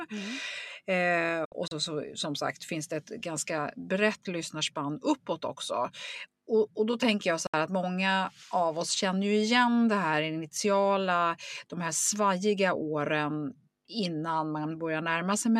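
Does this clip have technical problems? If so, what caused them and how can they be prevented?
Yes. A digital broadcast dropout hits the speech at 1.45 to 1.72 s as several short holes totalling 96 ms, the longest 64 ms, and again at 7.47 to 7.54 s for 64 ms. Each time, corrupted frames make the receiver fade to silence within 3 ms, so that audio is lost. Better reception and stronger error protection on the link would prevent it.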